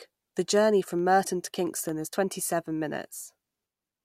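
A speech recording carries a run of seven small, evenly spaced ticks between 0.99 and 2.34 s, roughly five a second, each a brief click or micro-dropout lasting no more than a millisecond or two. These are CD scratch ticks: a scratch or blemish on the disc wipes out more data than error correction can repair once per revolution, so the player patches or mutes those samples, and that repair recurs in step with the disc's rotation.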